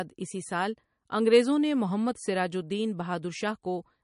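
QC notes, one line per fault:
Throughout, MP3 compression: the speech sounds watery and swirly, with metallic, chirpy s sounds and smeared consonant attacks, likely from MP3 encoding at a bitrate near 41 kbps. A spectrogram shows sparse high-frequency patches flickering between frames.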